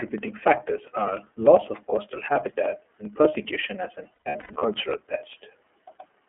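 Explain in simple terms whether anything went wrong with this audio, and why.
The whole clip carries the sound of the iLBC codec, a phone-style speech coder. Everything below about 250 Hz and above 3.4 kHz is gone, so the speech sounds thin, slightly rough and synthetic. Unlike a single glitch, this colouring never changes from start to finish.

Periodic USB or driver dropouts run from 0.08 s to 6.22 s. Roughly every 0.1 s, about a millisecond of audio is skipped, giving a steady ticking, around seventy ticks in all. What marks it out is the clockwork regularity, and the ticks only appear while there is sound.

Lost iLBC frames occur between 4.15 s and 4.62 s, where about a third of a second of audio went missing in pieces spread over nearly half a second. This fits eleven lost 30 ms frames. Instead of clicks, the gaps come out as a held, buzzy smear, each lasting up to about a tenth of a second, before the speech snaps back.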